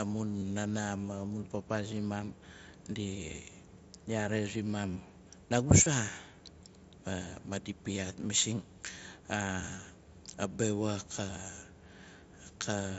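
At 0.39 to 0.42 s and 5.84 to 5.86 s, then briefly at 9.77 s, concealed Bluetooth headset packet loss fills the lost packets by repeating recent waveform. Unlike a dropout, there's no silence, just a short buzzy smear in the first two, while the single lost packet at 9.77 s is nearly hidden.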